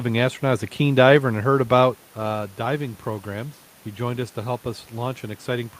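No technical faults can be heard at any point in the speech, and the room's background noise and the talker's change in distance from the microphone around 1.5 s are simply part of the recording.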